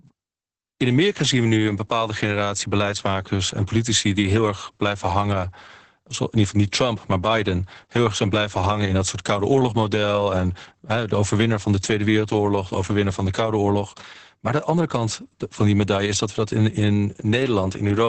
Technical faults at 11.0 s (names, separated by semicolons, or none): Opus voice compression